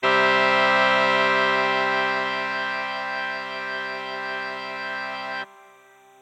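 Linear timecode running at 30 frames per second is leaking in from a neighbouring track or cable throughout. Its square wave flips between tones near 1 kHz and 2 kHz, giving a faint, steady chirping warble roughly 40 dB beneath the sound: timecode bleed.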